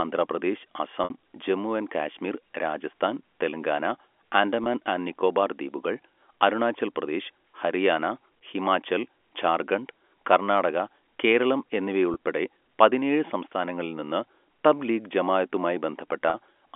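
Brief buzzy, held-over moments are audible at 1.04 s (60 ms, just before "ജമ്മു ആൻഡ് കാശ്മീർ രാജസ്ഥാൻ"), 4.64 s (20 ms, before "ആൻഡ് നിക്കോബാർ ദ്വീപുകൾ അരുണാചൽ"), 12.14 s (20 ms) and 16.3 s (40 ms). These are packet loss with pitch repetition: the receiver bridged each gap by replaying the last pitch period over the narrow G.711 telephone band. The gap lengths fit lost 20 ms packets.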